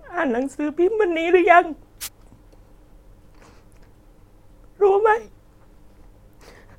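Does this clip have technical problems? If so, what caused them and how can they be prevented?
Yes. A wireless microphone noise hit occurs from 2.01 to 2.08 s: a brief burst of static as the FM radio link fades, receiver noise swells and covers the speech. Unlike a digital dropout, the sound is hissy rather than silent or stuttering. Shortening the distance to the receiver, keeping line of sight, and using diversity receiving antennas prevents such fades.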